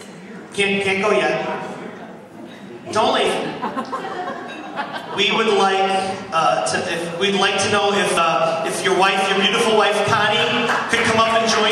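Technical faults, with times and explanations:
3.27 s and 8.17 s, audio missing between chunks: two abrupt skips, each losing roughly a tenth of a second, with the edges joined and no gap. This is likely the recorder dropping a short piece each time it swaps 5-second chunks.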